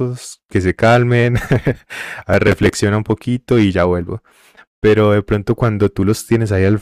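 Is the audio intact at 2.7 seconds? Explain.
No. From 2.33 to 2.73 s there is processor overload crackle: around seven short buffers, roughly 5 ms each, miss their deadline and replay old audio, giving a gritty tearing crackle. The waveform shows hard-edged steps, and the spectrogram shows thin vertical broadband streaks.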